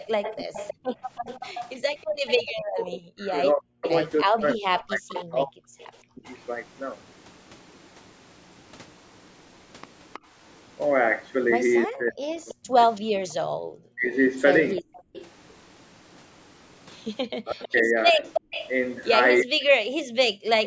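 From 0.0 to 6.35 s there is an echo leak. A faint copy of the far talker's voice trails it by 320 ms, around 15 dB down. The likely cause is a speakerphone whose echo canceller let part of the loudspeaker pickup slip back.

Between 0.41 and 6.27 s the near talker's speech is suppressed in double talk. Across about three seconds in total, the voice dips by as much as 40 dB or breaks into pieces. This likely happens because the canceller mistakes that speech for echo while both sides talk.

From 0.75 to 2.18 s the background is gated by the echo canceller. The room sound ducks by up to 26 dB, for about 0.3 s in total. It returns once the canceller releases.

A second echo leak runs from 10.13 to 18.71 s. It has the same 320 ms delay but is louder, roughly 10 dB below the speech.

From 10.19 to 15.13 s the background gating returns, harder. The room tone drops by up to 40 dB, for about 0.7 s in total.

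From 11.86 s to the end, double-talk suppression cuts in again. The voice loses around 40 dB in places, totalling about two seconds.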